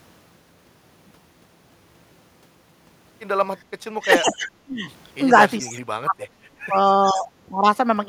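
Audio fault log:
3.94 to 7.66 s, speech suppressed in double talk. The speech level drops five times: 3.94 to 4.87 s, 5.30 to 5.40 s, 5.61 to 6.77 s, 7.12 to 7.28 s and 7.51 to 7.66 s. The two long dips reach about 40 dB down. The short ones reach about 5 dB and about 10 dB. The likely cause is an echo canceller that heard both sides at once. It could not tell the talker here from the loudspeaker echo, so it turned both down.
4.26 to 7.21 s, echo leak. A delayed copy of speech comes back three times: 4.26 to 4.35 s, 5.59 to 5.73 s and 6.87 to 7.21 s. Each copy trails its source by 427 ms. The first sits about 15 dB below the speech, the other two about 20 dB below. This is likely a loudspeaker's sound reaching the microphone and getting past the echo canceller. That residue was then sent back down the line.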